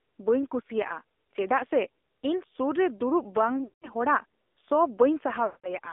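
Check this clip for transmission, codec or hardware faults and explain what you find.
Two faults here: the whole clip has been through a mobile speech codec, and there are two short dropouts from lost frames near the end.

AMR narrowband mobile codec, whole clip: The speech has gone through AMR-NB. The band runs from roughly 300 Hz to 3.6 kHz, so nothing above the narrowband ceiling survives. The codec rebuilds speech from a vocal tract model excited by a few pulses. At this rate, which fits one of the lower AMR modes around 7.4 kbps, the damage is plainly audible. The speech comes out buzzy and synthetic, with that thin phone-line quality.

Lost AMR speech frames, 3.64 to 3.88 s and 5.46 to 5.75 s: Each gap is about 180 ms, which points to about nine consecutive 20 ms frames failing their checks. With no valid data, the decoder repeats the last good pitch and vocal tract settings while lowering the gain. 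The sound smears out and fades toward silence across each gap. When decoding resumes, the speech comes back weak and a little rough for a moment.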